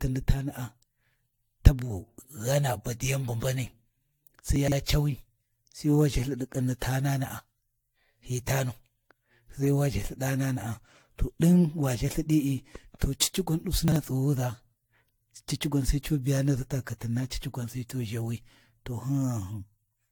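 Throughout the recording the speech has a swirling, hollow quality, with smeared consonant attacks. This is generation loss, and the likely cause is repeated lossy re-encoding, around seven passes, pointing to AAC-LC at roughly 96 kbit/s. Each pass requantises on a shifted frame grid, so the noise and spectral holes accumulate beyond what a single encode at that rate would leave. Nothing is present above 19.2 kHz.

From 4.56 to 4.72 s there is a brief jumbled stretch. These are chunks out of order: a 40 ms chunk plays three chunks late, after material that should have followed it. Nothing is dropped, but the sequence is scrambled across 160 ms with three hard splices. From 13.88 to 13.96 s the same fault recurs on a smaller scale, with one 40 ms chunk a single chunk late, heard as a short jumbled moment.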